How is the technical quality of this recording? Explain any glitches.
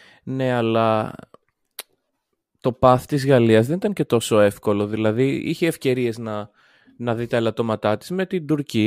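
The recording carries sample clock jitter for its whole length, a fine roughness riding on the speech rather than any discrete glitch. The converter's timing wobbles by around a microsecond, so each sample is taken a little early or late. Where the waveform changes fast, that timing error becomes an amplitude error, roughly 45 dB below the signal. It shows up as a grainy hiss that swells on loud and bright consonants and disappears in the pauses.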